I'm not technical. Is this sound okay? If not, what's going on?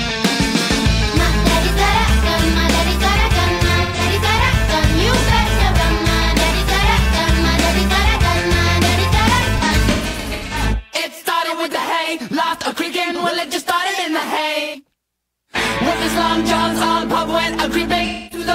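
No. There is AAC frame loss with concealment. Small chunks of audio went missing, and the player patched them with a smeared, blurry guess. You can hear it at 3.81 to 4.00, 9.57 to 10.61, 14.60 to 14.80, and 18.06 to 18.47 s.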